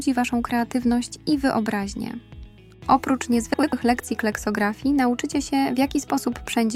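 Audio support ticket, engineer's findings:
Frames out of order at 3.54 to 3.73 s: short garbled flutter. Two neighbouring blocks of about 96 ms each arrived swapped and were decoded that way, so the halves play swapped. Points to packet reordering upstream of the decoder. Nothing's lost, just shuffled.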